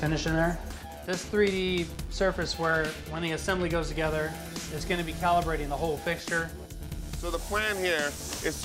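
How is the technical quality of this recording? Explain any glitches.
No glitches or dropouts are audible anywhere in the recording, so there is nothing to report.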